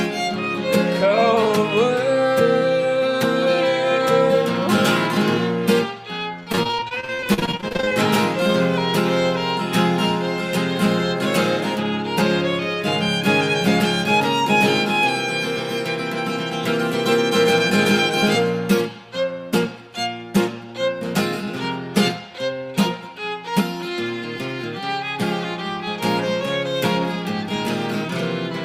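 From 6.43 to 7.93 s, repeated packet loss gives a robotic sound. Holes of up to 40 ms follow in succession, each patched by extending the last sound, concealing 39% of the stretch. Unlike one dropout, the gaps are filled rather than falling silent.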